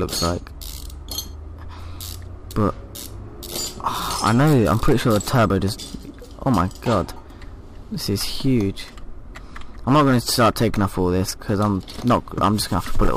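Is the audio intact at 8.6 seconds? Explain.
No. Hard clipping runs from 8.46 to 8.58 s, ending just before that moment. For that 0.12 s stretch the signal is driven about 2 dB past what the stage can pass, so its peaks are sliced flat. With so mild an overload, the effect is a brief crackle on the loudest peaks. On the waveform the tops sit as flat plateaus, and a spectrogram shows a thin burst of added harmonics reaching far up the spectrum.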